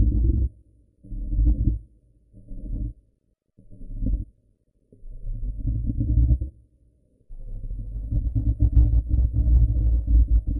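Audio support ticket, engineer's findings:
Regular ticking from 6.68 s to the end, 25 per second. Component: sample-rate converter, 44.1 kHz to 48 kHz, resampler restarted on every block. Each 40 ms block converted in isolation, so filter edges see silence or wrapped samples instead of neighbours. Small error at every block boundary, heard as ticks at the block rate, present only with signal.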